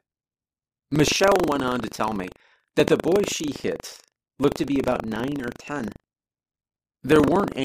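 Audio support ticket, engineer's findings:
Buffer tearing throughout: 25 Hz rattle only over speech. Ring-buffer pointers crossed; each period splices in a small slice about 70 ms stale. No silent gaps, unlike underrun.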